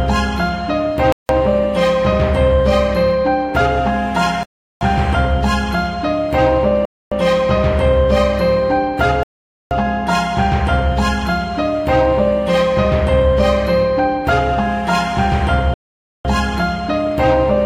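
The audio drops to dead silence five times: at 1.12 s for 0.17 s, 4.43 s for 0.38 s, 6.85 s for 0.27 s, 9.23 s for 0.48 s, and 15.74 s for 0.51 s, each time resuming abruptly. These are likely Bluetooth stalls, where delayed packets left the receiver's buffer empty until they arrived.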